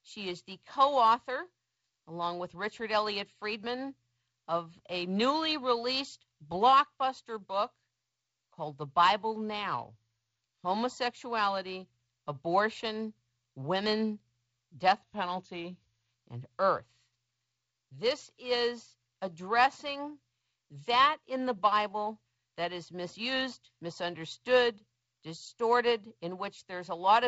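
From 15.02 to 16.10 s the speech slows by 6.4% and drops 114 cents, then snaps back, likely a drift correction step in clock-matching software.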